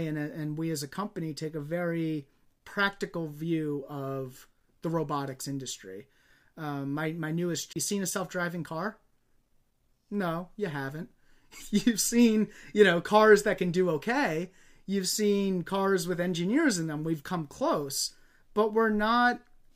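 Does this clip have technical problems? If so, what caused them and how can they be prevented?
Yes. A CD skip occurs at 7.73 to 7.76 s, right after "my my newest": a knock or disc flaw threw the laser onto a different turn of the spiral, so the player muted for roughly 30 ms and resumed reading from another point on the track. In this speech clip that is heard as a brief tick and gap, then an abrupt jump in the speech before "you seen a self". Keeping the disc clean and unscratched and isolating the player from vibration prevents this.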